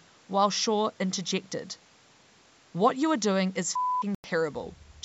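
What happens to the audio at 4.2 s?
From 4.15 to 4.24 s the speech cuts out completely for about 93 ms and then returns mid-flow, as if it had kept playing underneath. This is a Bluetooth dropout, likely caused by audio packets failing to reach the headphones in time, with a gap length that fits roughly five lost packets. On a waveform it appears as a flat near-silent stretch with abrupt or briefly faded edges. On a spectrogram it is a clean vertical blank band across all frequencies up to the 8 kHz ceiling of the call processing.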